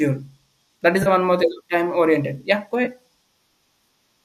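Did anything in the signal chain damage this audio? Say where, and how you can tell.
Yes. The damage is at the codec and network stage: AAC frame loss with concealment, at 1.03 to 1.08 s and again at 2.85 to 2.88 s. Each gap is about 30 ms and 20 ms, which fits three and then two lost 10 ms low-delay frames, likely from AAC-ELD. The decoder covers each hole by reusing the last good spectrum, so you hear a brief smeared, phasey patch. A buffer underrun would instead leave hard silence or a click.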